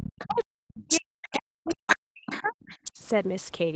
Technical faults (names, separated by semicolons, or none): other side's voice leaking through; speech suppressed in double talk